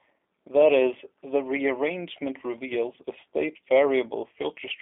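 G.729 coding runs throughout, plainly audible: the speech is rebuilt from a vocal tract filter, a pitch predictor and sparse pulses at what sounds like 8 kbit/s, so it comes out rough and synthetic, confined to roughly 250 Hz to 3.5 kHz, with nothing above 3.6 kHz.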